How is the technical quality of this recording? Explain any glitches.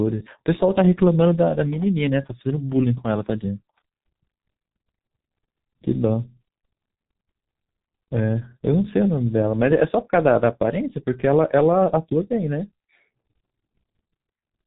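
The technical quality is poor, because the whole recording has passed through a G.723.1 codec, an early internet-telephony coder. From start to finish it packs the speech into a very low data rate, which fits about 6 kbit/s, and rebuilds it from a coarse voice model refreshed only once per long frame. Nothing survives above 3.8 kHz, so the speech sounds muffled and heavily damaged, with a hoarse edge and smeared consonants throughout.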